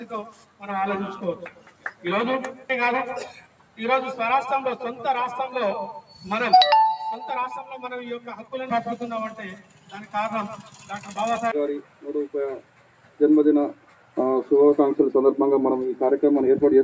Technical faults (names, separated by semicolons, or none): noise suppressor applied to music or sounds; sound cut by the noise suppressor